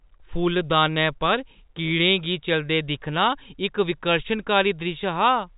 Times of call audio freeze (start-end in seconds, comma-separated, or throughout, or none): none